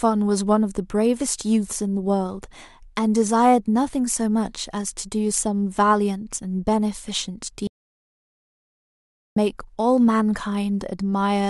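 An audio dropout to silence runs from 7.67 to 9.36 s: the speech cuts off mid-flow and leaves about 1.69 s of silence, with no room tone, before resuming abruptly. The likely cause is a brief loss of input while recording continued.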